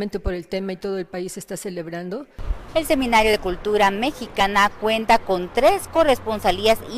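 At 5.95 to 5.98 s the audio jumps forward, skipping about 20 ms: compressed frames skipped. One or more whole frames never reached the output, either missing from the stream or rejected by the decoder as damaged, so playback resumes later in the material. On a spectrogram it shows as a brief vertical smudge; the waveform shows a sudden envelope discontinuity.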